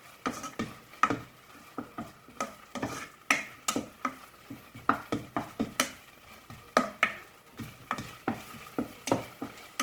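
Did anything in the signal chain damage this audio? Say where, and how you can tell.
Yes, at the codec: throughout, tones sound grainy, rough and noisy while bandwidth still reaches 20.3 kHz. The likely cause is Opus compression in CELT mode filling bit-starved bands with noise, consistent with a bitrate near 16 kbps.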